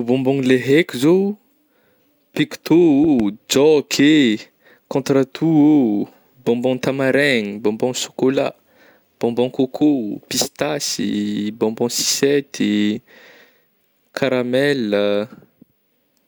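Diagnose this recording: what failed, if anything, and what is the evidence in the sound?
A loud pop, two in quick succession between 3.04 and 3.22 s, rises a few decibels above the speech, which continues underneath. The waveform shows sharp spikes and the spectrogram thin vertical broadband lines. The likely cause is an electrical transient entering the analogue wiring.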